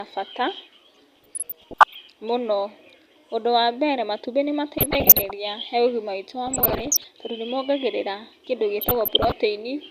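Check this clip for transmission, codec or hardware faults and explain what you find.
DAB burbling affects this speech clip in four bursts: 0.95 to 1.95 s, 4.78 to 5.31 s after "ũndũ wa mbere matumbĩ", 6.46 to 7.08 s after "he ũgima witũ wa", and 8.81 to 9.32 s after "tondũ nĩmongagĩrĩra kĩndũ". Weak reception lets bit errors, between about half a percent and one percent, slip past error correction into the MP2 data. Corrupted samples put short blips of noise into single sub-bands, and corrupted scale factors make individual sub-bands jump in level for up to a frame, producing burbling in the speech. A spectrogram shows scattered rectangular patches of energy, each confined to one band and lasting up to a frame.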